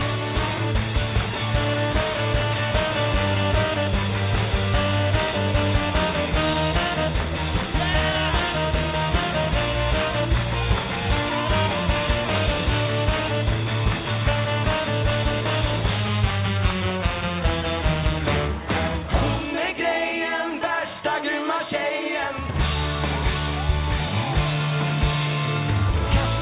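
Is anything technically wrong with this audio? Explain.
No, nothing is technically wrong with this audio. It has the narrow, telephone-like sound of a call carried over a WebRTC path, with nothing above 4 kHz and the light coding noise expected of G.711 mu-law.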